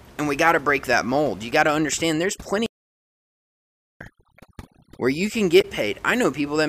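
A speech recording with three separate faults. From 1.51 to 5.34 s, overdone noise removal is at work: a noise reduction stage set far too aggressively decides which frequency bands are noise and cuts them almost to nothing. The room noise, which sits about 23 dB under the speech, drops and breaks up into twinkling, warbling specks, and the quieter components of the voice are stripped away with it.

Inside that span, a playback stall silences the output from 2.66 to 4.01 s, a gap of about 1.34 s. The likely cause is the player running dry of data or its thread being held up, so nothing reaches the output until it catches up. The speech halts mid-flow, drops into dead silence for just over a second, and then resumes.

Finally, from 5.61 to 5.65 s, damaged data in a compressed stream corrupts the encoded data. The decoder misreads that section, loses its place in the stream and hunts for the next valid frame header. 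The result is a short disturbance lasting about 40 ms.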